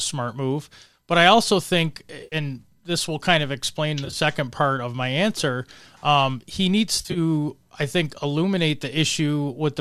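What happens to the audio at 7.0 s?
AAC frame loss with concealment runs from about 6.97 to 7.18 s. Around 110 ms of coded audio is missing, spread in short gaps over roughly 180 ms, with no single gap much longer than about 40 ms. For each gap the decoder patches in a guess built from the last intact spectrum, so the speech briefly smears into a noisy, phasey blur rather than dropping to silence. The stream carrying it is likely low-delay AAC (AAC-ELD).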